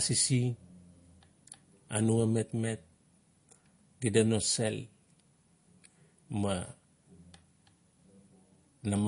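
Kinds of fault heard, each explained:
MP3 compression: The encoder was likely starved of bits, consistent with a low rate near 40 kbps, so it discarded all content above 10.6 kHz and dropped weak frequency lines frame by frame, leaving the speech throughout dull, with plainly audible watery, swirling artefacts.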